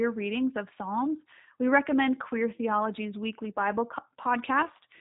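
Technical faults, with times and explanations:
Throughout, G.729 codec: the speech has that rough, slightly synthetic edge you get when a low-rate VoIP codec rebuilds it from a vocal tract model and a few pulses per frame. Nothing gets through above 3.8 kHz, and the damage is plainly audible, which fits an 8 kbit/s G.729A stream.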